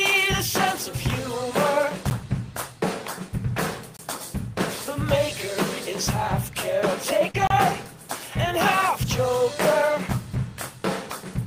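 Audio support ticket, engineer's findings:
Block of digital silence at 2.10 s (10 ms), 3.97–3.99 s (23 ms) and 7.47–7.50 s (30 ms). Output hard-cut to silence, no fade. The 10 ms block reads as a tick, and the 23 ms and 30 ms blocks as short holes. Probable component: playback or processing stage missing its buffer deadline, or a calculation producing invalid values that were zeroed. Three separate dropouts point to a recurring underrun, not one glitch.

Short concealed packet loss at 7.31–7.36 s. About 40 ms of audio never reached the decoder in time, and about 34 ms was synthesised by the receiver's concealment, extending the preceding sound and then crossfading back into real audio. Heard as a brief smear just ahead of the 7.47 s silence block. Probable component: network path or jitter buffer on the receive side, with decoder concealment masking most of the gap.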